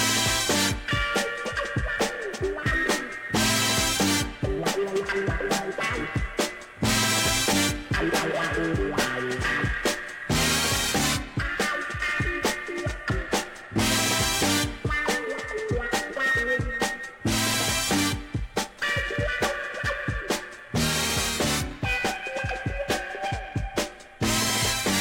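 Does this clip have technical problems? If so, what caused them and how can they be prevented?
No, nothing stood out as a technical problem on listening, so there is nothing here that needs a cause or a fix.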